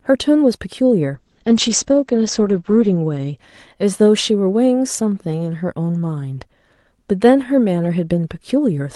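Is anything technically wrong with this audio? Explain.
Yes. From 1.15 s to 3.43 s the speech turns rough and muffled, with a watery, smeared texture; for about 1.8 s it sits at its worst, and the top of the sound is audibly cut, falling from around 12 kHz to 8 kHz. This is a call bitrate drop: the call's bandwidth estimate fell, so the Opus encoder had to code far more coarsely, consistent with a fall from roughly 32 kbps to 9 kbps.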